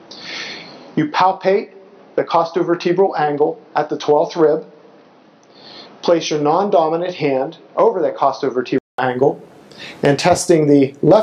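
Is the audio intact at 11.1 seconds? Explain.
Yes, at 11.1 seconds the audio is intact, with no dropout, click, distortion or other fault heard at that moment.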